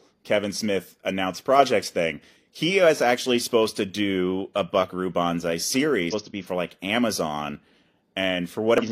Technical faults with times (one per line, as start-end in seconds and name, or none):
6.09-6.14 damaged data in a compressed stream
8.78-8.83 damaged data in a compressed stream